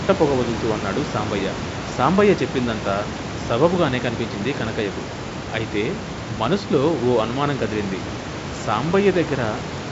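No technical faults are present.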